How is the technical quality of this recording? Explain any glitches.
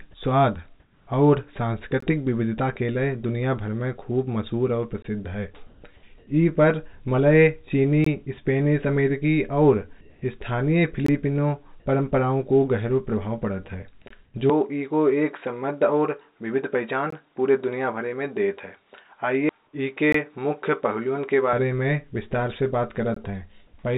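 The recording has four kinds of glitch: regular dropouts, artificial background noise, one clipped fragment of speech, and a stretch where the tone of the input changes.

From 0.80 to 1.07 s, 5.67 to 5.82 s, 6.18 to 6.27 s and 10.01 to 10.22 s, the pauses sound like comfort noise in place of the background. The likely cause is that the sender stopped transmitting during silence, and the receiver filled the gap with synthetic hiss shaped to roughly match the room. In each patch the natural background gives way to a flat, featureless noise, and the level shifts by about 2 to 8 dB. On a spectrogram these patches appear as smooth, even texture without the fine grain of the surrounding background.

Every 3 s there is a gap between chunks lasting 20 ms, at 2.00, 5.02, 8.04, 11.06, 14.08, 17.10, 20.12 and 23.14 s. The first falls just before "विविधता के लिए दुनिया", and the last comes right after "में विस्तार से बात". 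The audio was delivered in 3-second blocks with a slight delay at each join. On the waveform each gap is a hard-edged flat line. On a spectrogram it is a thin vertical blank stripe, and the stripes recur at a steady spacing.

At 14.25 to 14.34 s, sound dropped by the voice detector cuts off about 40 ms of sound, and 90 ms of steady noise takes its place. The likely cause is that the detector mistook that stretch for background and stopped sending until it triggered again. On a spectrogram the speech harmonics stop abruptly and give way to uniform noise, and the speech returns just as suddenly.

From 14.50 s, just before "में विस्तार से बात", until 21.53 s, the input switched to a poorer device, and the sound takes on a different, duller character. The likely cause is a change of input device in the middle of the recording. There is no silence at the switch and the loudness stays about the same, but the band narrows, and a faint new noise floor appears far below the speech. 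On a spectrogram the upper band is empty throughout this stretch.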